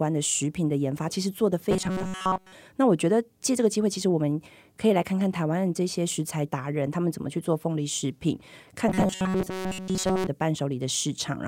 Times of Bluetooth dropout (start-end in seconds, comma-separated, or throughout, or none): none